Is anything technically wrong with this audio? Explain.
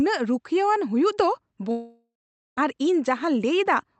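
Yes. A long network dropout at 1.71 to 2.59 s: packets likely stopped arriving, so the last sound trails off as a fading buzz, then silence, and the speech resumes with that stretch missing.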